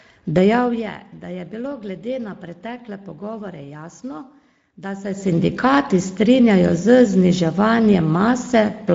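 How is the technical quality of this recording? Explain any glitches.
The recording is compromised by plainly audible Speex codec damage from start to finish. Speex coding throughout: with too few bits for the excitation, the speech sounds hoarse and noisy, which fits a bitrate near 16.8 kbps. A spectrogram shows nothing above 7.7 kHz, with smeared, grainy harmonics. The gentle fader-like level changes appear in the waveform as smooth ramps.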